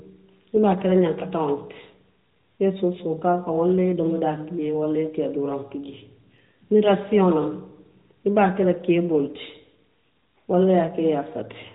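No technical faults are audible.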